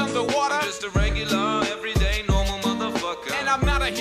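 Computer activity noise runs from start to finish: a faint buzzing, chirping texture pulsing roughly a hundred times a second, around 40 dB below the signal, as processor or mouse load shifts the shared ground. A spectrogram shows fine, regularly spaced vertical striations independent of the sound.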